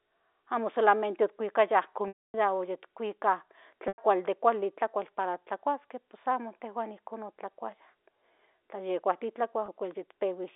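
Packet loss with pitch repetition occurs at 2.08–2.34 s, 3.88–3.98 s (just before "de kuali") and 9.66–9.68 s. Each time, the receiver bridges the missing audio by repeating the last pitch period. The 260 ms gap fades into silence before the speech cross-fades back in, the 100 ms gap is a shorter held stretch, and the 20 ms gap is a brief, buzzy hold. All of this is heard through the narrow 300 Hz to 3.7 kHz band of G.711 telephone coding.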